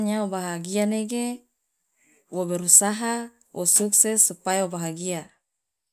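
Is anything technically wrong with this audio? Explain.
No, nothing in this speech recording points to a technical fault; the signal holds steady and intact throughout.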